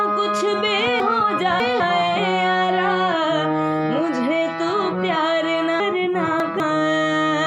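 Chunks out of order: twice, a 200 ms chunk was delivered three chunks late, so from 1.0 to 1.8 s and again from 5.8 to 6.6 s the audio jumbles briefly with three hard joins.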